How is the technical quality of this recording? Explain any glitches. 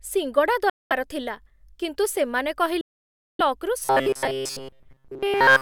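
The recording has three clear problems: two gaps where the sound cuts out, and a stretch at the end where it turns mechanical.

The first Bluetooth dropout runs from 0.70 to 0.92 s, right before "ଥିଲା କିନ୍ତୁ ସେମାନେ". The second, longer one runs from 2.81 to 3.41 s, just after that same phrase. Both sound like the speech is simply switched off, with about 0.21 s and about 0.58 s of silence. When the sound comes back, it's further along, as if it kept playing through the gap. That's what you'd expect if audio packets likely missed their deadline to the headphones and got thrown away, leaving nothing to play until fresh ones turned up.

From 3.85 s to the end, the speech becomes robotic, the classic sound of repeated short buffers. A stiff, metallic buzz at 133 Hz sits over the speech, though the rough shape of the speech still comes through. What's likely happening is that new audio isn't arriving often enough, so the playback fills in by looping the last little chunk over and over while most of the real audio in that stretch is skipped. 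A 133 Hz buzz points to a loop of roughly 7.5 ms, and that fixed repeat rate is what stamps the constant pitch onto the speech.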